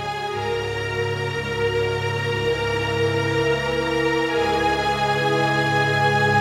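No technical faults can be heard anywhere in the recording, and the signal holds steady throughout.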